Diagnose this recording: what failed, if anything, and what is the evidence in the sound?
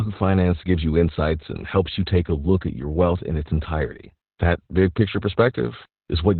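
The failure is at the codec stage: Opus voice compression, heavy and present throughout. Nothing survives above 4.2 kHz, so the speech is muffled and narrowband. A hoarse, slightly robotic texture points to coarse excitation coding in the SILK coder, which fits a bitrate near 8 kbps.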